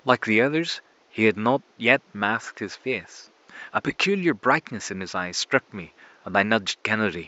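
Speech recording with no technical faults to report.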